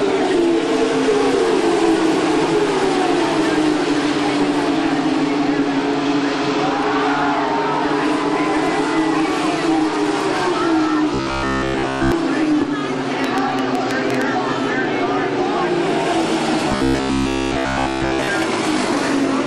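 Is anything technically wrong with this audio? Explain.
Yes, three faults are audible. From 11.14 to 12.12 s and again from 16.69 to 18.28 s there is robotic sound from repeated short buffers. New audio likely stopped arriving in time, so the playback chain looped a single 15 ms slice over and over while the real material was skipped. Across both spans the sound is made entirely of repeats, and the 15 ms loop sets a fixed 66.7 Hz pitch: a stiff, metallic buzz that only loosely tracks the underlying sound.

Between 13.24 and 14.23 s there is a train of clicks, likely from electrical interference or a faulty connection injecting short pulses into the signal. Around seven near-identical clicks arrive at an uneven pace averaging 7.2 per second, peaking about 15 dB above the surrounding sound. They come through as sharp ticks and pops laid over the audio rather than blending into it.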